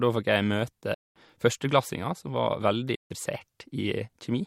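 Twice the speech cuts to silence and then comes back as though it had carried on underneath: first from 0.94 to 1.16 s, a gap of about 0.21 s, then from 2.95 to 3.11 s, about 0.15 s. This is likely a Bluetooth dropout, where audio packets reached the headphones too late to play, were discarded, and left silence until fresh packets arrived.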